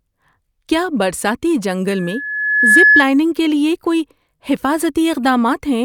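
At 1.90 s a loudspeaker feedback squeal kicks in: the mic is hearing its own speaker, and around 1.7 kHz the loop gain tops one. It swells over about a second to roughly 10 dB above the speech, then cuts off at 3.06 s.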